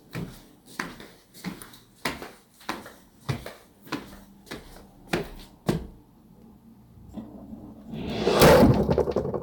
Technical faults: hard clipping

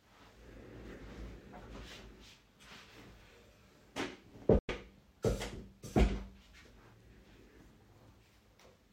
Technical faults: digital broadcast dropout

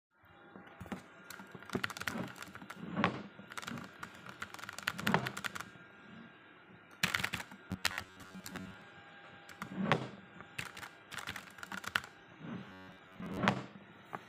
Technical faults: robotic sound from repeated short buffers

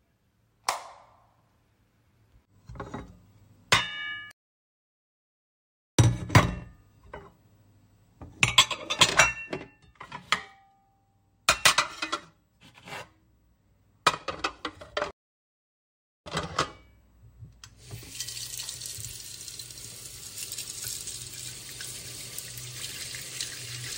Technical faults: playback stall

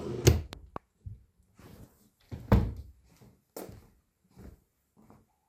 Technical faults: loud pop

